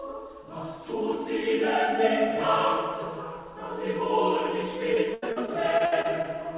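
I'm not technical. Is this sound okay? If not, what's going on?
No. From 4.94 to 6.26 s there is repeated packet loss, which gives a robotic sound. Over that stretch the sound drops out eight times, the longest gap being 82 ms, and each gap is filled by stretching the last bit heard, leaving it choppy.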